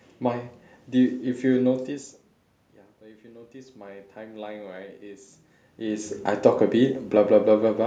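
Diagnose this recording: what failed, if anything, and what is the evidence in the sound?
From 2.99 s to 4.61 s the voice and the room noise behind it swell together by about 7 dB, the background rising along with the speech. That shared rise points to automatic gain rising in the call-processing stage. The level at the microphone had dropped by about 19 dB, fitting the talker moving back around 2 s, so the gain control read the input as too quiet and raised its gain over roughly one and a half seconds.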